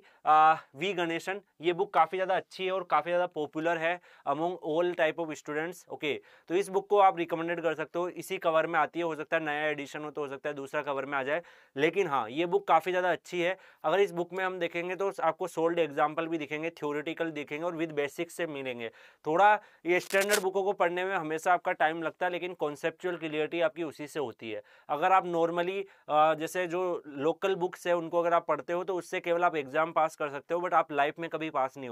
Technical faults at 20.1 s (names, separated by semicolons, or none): cable scratch noise